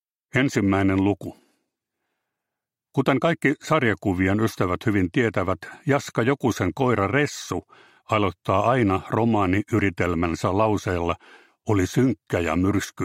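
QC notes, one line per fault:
No faults were heard anywhere in this clip.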